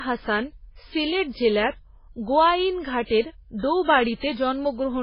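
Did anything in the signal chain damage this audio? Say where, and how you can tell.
Yes, at the codec stage, throughout the speech: nothing reaches above 5.3 kHz, and the dull, smeared coding artefacts point to a very low-bitrate MP3. This is likely low-bitrate audio saved at a high bitrate. A plain low-pass filter would leave the lower band clean, and a single high-bitrate encode would keep far more top end.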